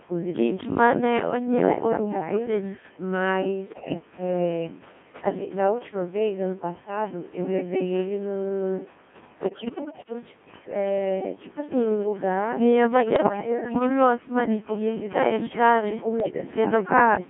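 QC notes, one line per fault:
Throughout: Codec 2 vocoder. The buzzy, robotic timbre fits a 1.6 kbit/s mode that rebuilds the speech from sine waves using pitch, voicing and spectral envelope. On a spectrogram there are clean harmonic combs confined to 150 Hz–3.4 kHz, and the waveform shape is not preserved.
3.66–3.94 s, 5.24–5.46 s, 9.40–10.13 s, 13.16–13.89 s, 16.20–16.38 s: bit errors on digital voice radio. Flipped bits, on the order of several to ten percent, corrupt whole frames' parameters, so the synthetic speech jumps in pitch and level and breaks into warbles and bleeps. These appear as abrupt harmonic shifts and blocky level steps on the spectrogram.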